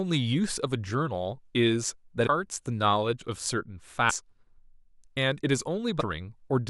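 Damaged data in a compressed stream disrupts this speech clip at 2.25–2.28 s, 4.09–4.11 s and 5.99–6.02 s, each a brief chirp or blip. Corrupted bytes make the decoder misread those frames, lose sync and hunt for the next valid frame header.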